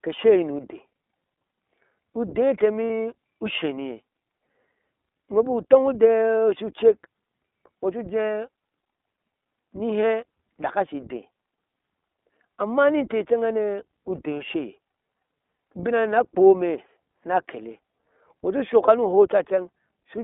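From the start the speech has the narrowband character of the iLBC codec. The line runs from about 250 Hz to 3.6 kHz, so a spectrogram shows a hard ceiling near 3.6 kHz with nothing above it and thin lows. Each 20 ms frame's excitation is coded independently, and at a rate that fits iLBC's 15.2 kbps mode the voice comes through intelligible but plainly rough and slightly synthetic. This graininess shows as smeared, less defined harmonics.

Lost iLBC frames occur at 2.85 to 2.90 s (about 60 ms, roughly three frames), at 13.73 s, and at 18.86 to 18.89 s, the last two each about 20 ms long. In each gap the decoder repeats the last pitch cycle mixed with noise, which is heard as a brief held, buzzy vowel. On a spectrogram it appears as flat, frozen harmonic stripes. The waveform shows near-identical repeated cycles, longest and fading at 2.85 s. Because iLBC frames stand alone, the voice recovers immediately afterward.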